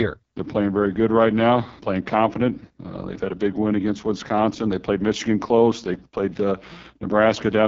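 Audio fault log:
throughout: AMR wideband (HD Voice) codec. Heavy damage makes the speech rough and raspy, with nothing above 7.5 kHz. That fits the lowest 6.6 kbit/s mode. Unlike narrowband telephony, the 6.4 to 7 kHz band survives, but only as hiss-like filler.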